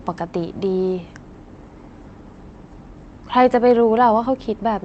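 No technical faults are audible anywhere in this recording.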